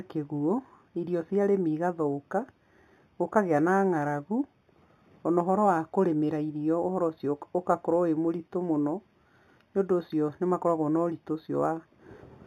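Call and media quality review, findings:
Imaging from linear upsampling, throughout the speech: dulled top end with faint metallic shimmer on sibilants. Mirrored spectrum in the 4–8 kHz band, roughly 40 dB down. Probable resampler using straight-line interpolation, consistent with an 8 kHz source raised to 48 kHz.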